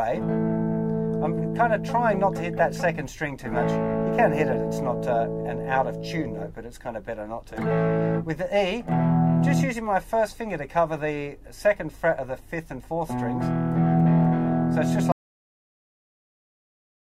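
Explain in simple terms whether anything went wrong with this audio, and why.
At 15.12 s the sound stops abruptly and stays completely silent until the end, about 2 seconds later. This is an audio dropout to silence. The input was likely lost, perhaps through a disconnected device or an accidental mute, while the recording carried on writing nothing. Unlike a fade-out or a quiet pause, it doesn't taper off, and even the faint background hiss of the room disappears. Whatever was happening during those last seconds is gone.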